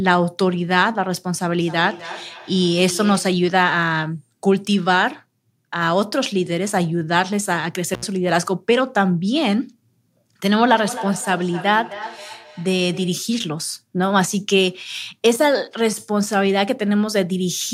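From 1.6 to 3.51 s, feedback echo between two devices returns the speech at a steady interval of roughly a third of a second, at about -15 dB. The speaker's own echo canceller can't remove it because another device in the room is replaying it, so the repeats come back thinner and ringing rather than as one clean delay. At 7.94 to 8.04 s an intermittent contact cuts the line open for 70 ms, with crackle at both edges, unlike a clean digital dropout. The same echo returns from 10.62 to 13.34 s at about -13 dB.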